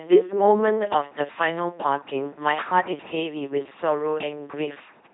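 From start to finish the speech runs through an LPC-10 vocoder, which fits a 2.4 kbit/s stream. Each frame is rebuilt from a ten-pole vocal tract filter driven by either a pulse train or noise, never a blend, so the voice turns into a heavy, buzzing robot tone, with stray buzz or hiss wherever the voicing choice misfires. A spectrogram shows rigid, evenly spaced harmonics, blocky frame-to-frame changes and nothing above 3.9 kHz.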